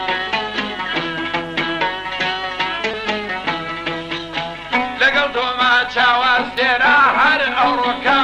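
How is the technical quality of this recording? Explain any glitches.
Two brief glitches from short concealed packet loss, at 2.91 to 2.95 s and 5.77 to 5.81 s. Each time, about 20 ms of audio arrived too late. The receiver bridged the gap by extending the preceding sound and then blending back, which leaves a brief smear or wobble.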